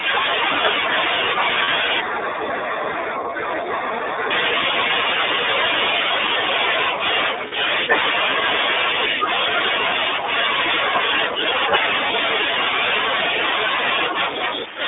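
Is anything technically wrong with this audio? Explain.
Yes, there are three kinds of fault in this speech.

Throughout, the signal passes through the iLBC codec, which fits its 15.2 kbps mode with 20 ms frames. Each frame's excitation is coded independently, and the line is limited to roughly 250 Hz to 3.6 kHz. The speech sounds narrowband, thin and plainly rough or synthetic.

Lost iLBC frames occur at 1.64 to 1.69 s (40 ms), 4.88 to 4.92 s (20 ms), 7.48 to 7.53 s (40 ms) and 12.08 to 12.11 s (20 ms). The decoder fills each gap by repeating the last pitch cycle mixed with noise, so a brief buzzy, held vowel-like smear replaces the lost sound. The voice returns immediately afterwards because each frame decodes on its own.

Channel delay causes comb filtering from 2.01 to 4.31 s. One channel lags the other by a small fraction of a millisecond, and the two are summed to mono. Shared content cancels at evenly spaced frequencies, with the first notch around 3 kHz, so the speech sounds hollow and dulled in the upper band.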